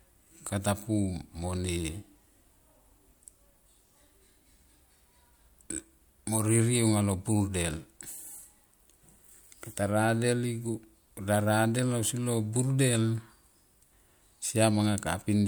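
Speech recording with no audible technical faults.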